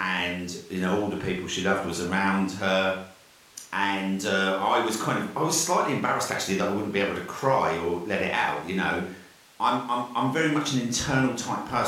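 Nothing in this bit of speech points to any technical fault; it's a relaxed listen all the way to the end.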